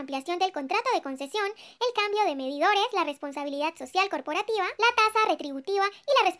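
From start to end the audio runs fast and sits high, hurried at 1.38 times normal speed and raised 5.55 semitones. That is a wrong sample rate, with samples replayed unconverted at a higher rate, which fits 16 kHz material played at 22 kHz.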